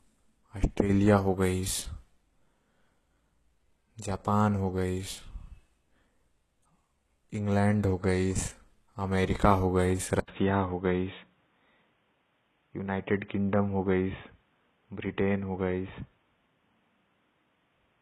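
From the start, the speech carries gritty, metallic sibilants and treble rebuilt above a coded band, likely HE-AAC compression at a very low bitrate, near 16 kbps. A spectrogram shows smeared, copied-looking treble ending at 12.3 kHz.

At 10.20 s an 80 ms gap, a flat line on the waveform, precedes what is likely the input switched to a poorer device. The sound turns dull at a similar overall level, the spectrogram stops at 3.8 kHz, and a faint new noise floor appears about 45 dB below the speech.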